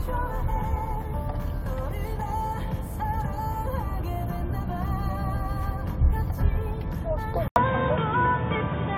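At 7.48 s the everyday sound drops out for about 80 ms, then returns duller and boxier, and it stays that way to the end. Above 3.8 kHz there's simply nothing left. The level shifts by a few dB, and a new noise floor comes in, sitting roughly 35 dB under the sound. That combination points to an input switched to a poorer device, likely a swap to another mic or a headset's call profile.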